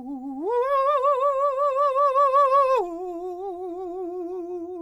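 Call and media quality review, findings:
Music clip reviewed, no audible defects found, no action required.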